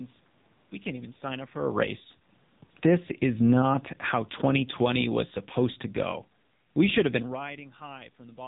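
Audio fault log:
Throughout: AMR narrowband mobile codec. The speech passes through a heavily squeezed vocal-tract model, which fits a low rate of about 6.7 kbps. The voice sounds buzzy and synthetic, the room noise swirls and warbles, and nothing reaches above 3.8 kHz.
1.58–2.05 s: automatic gain falling. Just after "can't even sign up", the gain control judges the input too loud and lowers its gain by about 8 dB. Voice and background sink together, which is separate from the talker shifting position around 1.5 s.
1.97–2.47 s: automatic gain rising. Overlapping the previous drop, the control reverses and raises its gain by about 8 dB. The sound swells back up over half a second, voice and background lifting together, so the level pumps down and up.
2.7–5.01 s: automatic gain falling. The gain control again finds the input too loud and pulls its gain down by about 9 dB over more than two seconds. 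The speech and room noise fade slowly together, ending just before "was supposed to go".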